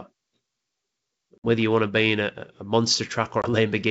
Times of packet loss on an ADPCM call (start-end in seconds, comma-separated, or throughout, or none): 1.38-1.46, 3.42-3.46